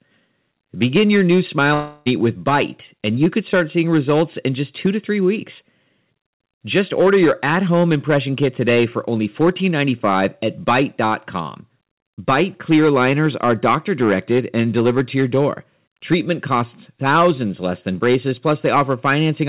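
Hard clipping runs through the whole recording. The speech is driven about 8 dB past what one stage can pass, so its loudest peaks are sliced flat. Only a small share of the samples are affected, but each flattened top throws off harmonics far above the original sound. The result is a crackly, gritty edge on stressed syllables and peaks. Within the call path's roughly 4 kHz band, that edge reads as rasp more than sparkle.

A long network dropout, likely the cause of this gap, begins at 1.74 s, right after "your new", and lasts until 2.08 s. For about a third of a second, no real audio arrives. The receiver stretches the last sound it had into a fading buzzy tail that covers the whole gap, so there is no true silence. Speech then resumes with roughly 0.32 s of the original simply missing.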